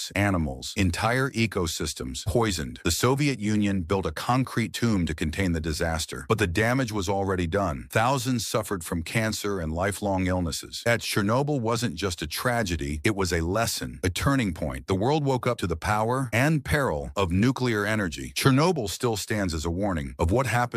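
No technical faults are audible.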